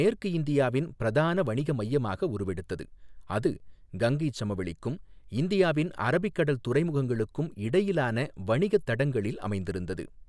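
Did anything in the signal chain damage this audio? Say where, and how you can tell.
No, no signal-chain damage heard.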